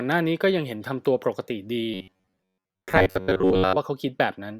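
From 1.94 to 3.77 s the speech becomes a rigid, metallic buzz near 93.8 Hz: robotic sound from repeated short buffers, likely from audio arriving too seldom so a slice of roughly 11 ms is looped over most of the stretch. A spectrogram shows flat harmonic lines every 94 Hz, and the waveform shows identical cycles repeating.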